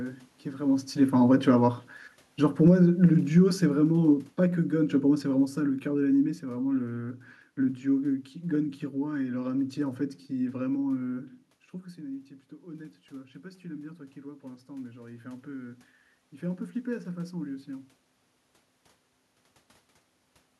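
Speech, with two gain-control faults. From 0.98 to 6.45 s there is automatic gain falling. The talker moves around 0.5 s, the control judges the input too loud or its background noise too strong, and it pulls the level down by about 12 dB. The room noise sinks with the voice. Automatic gain rising appears twice. From 2.74 to 3.24 s the gain climbs about 4 dB, briefly countering the fall. After the talker moves back around 11.5 s, the input drops about 14 dB. The control then raises gain about 5 dB from 12.04 to 15.85 s, so voice and background swell together.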